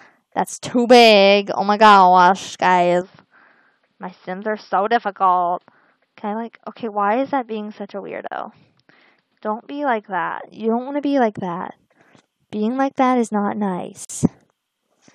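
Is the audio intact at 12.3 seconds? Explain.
Yes, the audio is intact at 12.3 seconds, with no dropout, click, distortion or other fault at that moment.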